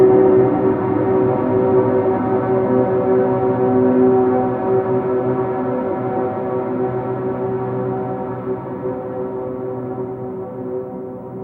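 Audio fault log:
No technical faults detected.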